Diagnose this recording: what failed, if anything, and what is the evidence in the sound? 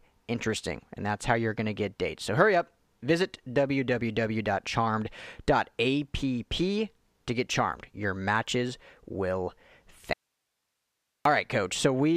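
The speech cuts out abruptly at 10.13 s and returns at 11.25 s. For about 1.1 s only hiss remains, roughly 55 dB below the speech level. This is an audio dropout to a faint residue, likely an intermittent analogue connection upstream while the input stage stayed live.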